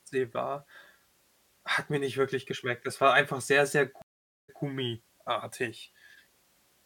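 At 4.02 s, right after "war einfach sehr sehr", the speech cuts out in a stream reconnect. The connection dropped, the player fell silent, then rejoined the stream with a fresh decoder. The gap lasts about 0.46 s. When sound returns, it picks up about 0.14 s earlier than where it stopped, so a short stretch of speech repeats. The first moment after the restart is muted or fades in. The whole event runs until 4.62 s.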